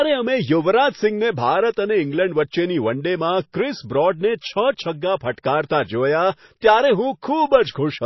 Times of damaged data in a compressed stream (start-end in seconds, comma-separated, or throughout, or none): none